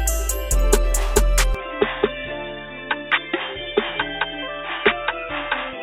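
At 1.55 s the audio abruptly turns dull and boxy and stays that way to the end, with no gap at the change. Nothing above 3.8 kHz survives, the level drops by about 5 dB, and a faint new background noise appears, likely from the input switching to a poorer device.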